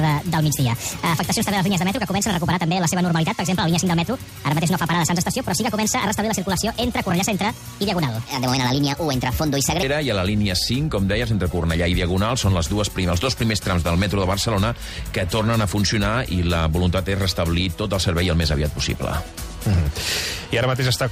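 From the start to 9.83 s the audio sounds high and hurried, raised about seven semitones and running 1.46 times too fast, then snaps back to normal pace. This section at the wrong speed was likely played against the wrong clock, shifting pitch and tempo together.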